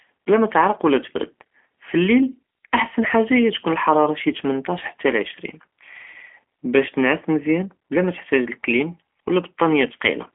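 From start to finish the speech carries G.729 codec damage. Nothing above 3.5 kHz survives, and the lows thin below 250 Hz. Unlike a plain telephone band-limit, it sounds rough and faintly synthetic, with a buzzy rebuilt texture that fits 8 kbit/s model-based coding.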